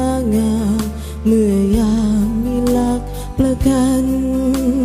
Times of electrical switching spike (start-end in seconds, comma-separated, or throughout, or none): none